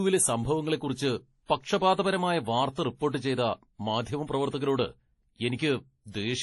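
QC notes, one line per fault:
Throughout, transcoding between lossy codecs: nothing above 11.5 kHz, two layers of artefacts mixed, likely low-bitrate MP3 re-encoded as WMA, lowest cut-off kept.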